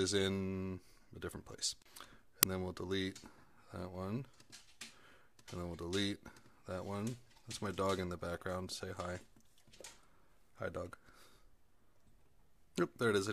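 At 2.43 s there is a sharp, loud crack lasting about 2.9 ms. This is an uninitialised buffer. A block was played before any audio was written into it, so stale memory came out as samples. The length fits a 128-sample buffer.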